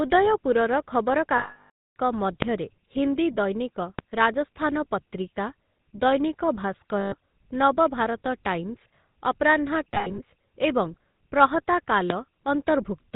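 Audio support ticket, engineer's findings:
GSM full-rate codec throughout: buzzy, gravelly roughness on the speech, nothing above 4 kHz, damage plainly audible. Sounds like the 13 kbps GSM full-rate path, which models the vocal tract and excites it with sparse regular pulses, hence the grit.

Lost GSM frames at 1.38–1.96 s: a rough metallic ring, then silence, over about 580 ms, which fits roughly 29 dropped 20 ms frames. Shorter ones at 7.00–7.15 s (120 ms) and 9.94–10.20 s, where gaps are scattered over about 240 ms and the longest run is around 70 ms. The decoder repeats the last good frame at falling level.

Loud pops at 2.42–2.46 s, 3.99–4.03 s and 12.10–12.14 s: single sharp pops over the speech, which carries on underneath. They peak about 20 dB above the signal at the first and last and about 15 dB at the middle one. Likely a voltage step from a plug, switch, static or driver glitch, shaped by the downstream circuitry.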